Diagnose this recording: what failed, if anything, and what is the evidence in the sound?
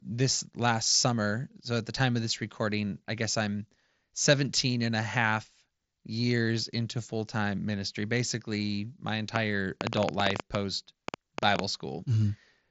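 Likely interference on the analogue wiring injects a train of clicks from 9.36 to 11.6 s, after "time ministry basically my": about twenty irregular ticks, eight per second, roughly 20 dB over the speech.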